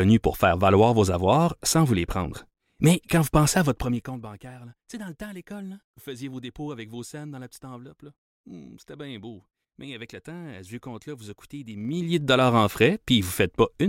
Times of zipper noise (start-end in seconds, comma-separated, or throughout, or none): 3.64-4.22, 11.75-12.23